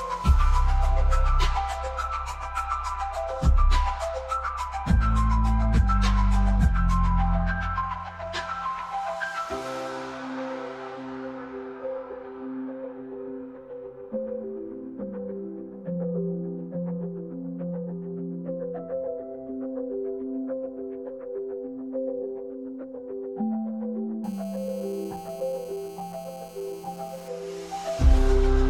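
A 2G handset close to the recording chain, apparently mid-call, had its pulsed transmissions rectified by the audio circuitry from 24.24 to 27.28 s. That injects a GSM phone buzz: a steady, hard, raspy tone at 217 Hz, rich in harmonics, about 26 dB below the sound.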